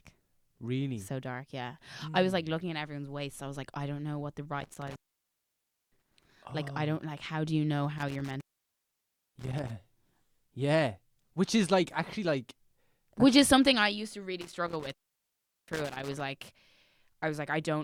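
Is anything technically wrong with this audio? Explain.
Yes. Intermittent contact interrupts the speech three times: at 4.61 to 6.24 s after "don't know what the", at 7.98 to 9.70 s after "how do you know", and at 14.41 to 16.21 s after "something I used to". A loose connection briefly opens the signal path, dropping the audio for about 0.96, 0.95 and 0.74 s, with crackle at each break and faint hiss in the gap.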